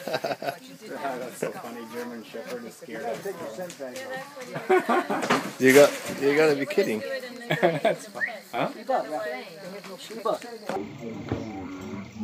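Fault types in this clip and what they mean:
Stereo read as mono: interleaved left and right samples are treated as one channel, so from 10.76 s to the end the audio runs at half speed, an octave low.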